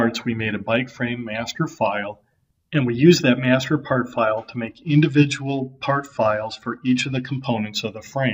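From about 4.71 s to 7.45 s you get a Bluetooth SBC bit pool drop. The link got congested, so the sender cut the encoder's bit budget to keep audio moving, which fits a fall from a bit pool of around 31 down to 10, roughly 77 kbps. With so few bits, the upper sub-bands are starved and everything else is coarsely quantised. The top end goes dull and a gritty grain creeps in until the rate recovers.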